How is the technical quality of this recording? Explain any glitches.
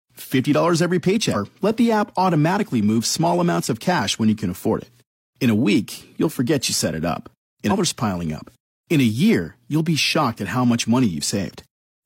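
Two short glitches mar the recording, both from damaged data in a compressed stream, at 1.30 to 1.36 s and at 7.67 to 7.73 s. At each point a stretch of the encoded file is corrupt, so the decoder can't read those frames, loses its place and hunts for the next valid frame header before resuming. The result is a brief burst, about 60 ms long, that sounds like a chirp or squawk cutting into the audio before it carries on.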